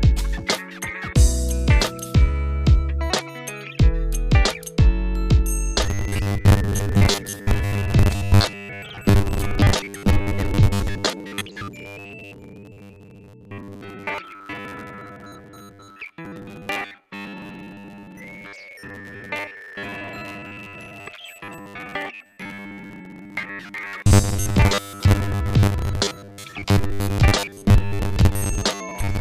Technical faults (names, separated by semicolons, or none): robotic sound from repeated short buffers